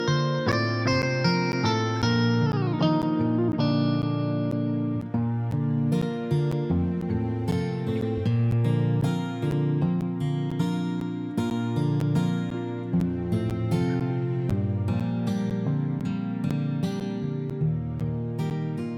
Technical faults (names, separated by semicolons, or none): periodic USB or driver dropouts